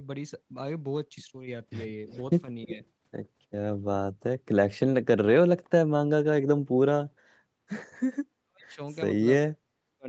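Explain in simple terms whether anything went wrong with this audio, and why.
Something went wrong twice over. The most likely cause of the first problem is an echo leak: the far side's echo canceller let some of its loudspeaker sound back into the call. From 2.08 to 2.21 s you can hear a faint repeat of the talker, arriving about a third of a second late.

The second problem is speech suppressed in double talk, most likely because both sides spoke at once and the echo canceller turned down the real talker along with the echo. At 2.66 to 2.81 s the voice dips only slightly. From 8.43 to 8.8 s and again from 9.51 to 10.07 s it drops so far it almost disappears.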